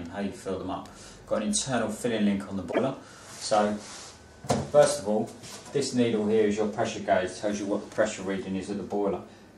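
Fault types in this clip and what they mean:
Broken MP3 bit reservoir: from 2.71 to 2.79 s the sound jumps ahead and garbles. The likely cause is dropped frames, so the next frame reads another frame's bytes.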